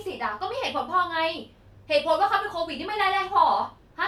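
Nothing in the recording stood out as a technical fault on listening.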